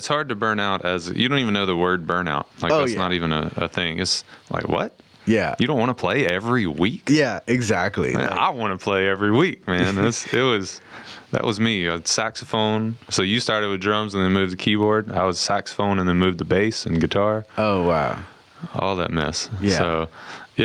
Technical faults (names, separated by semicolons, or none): gain pumping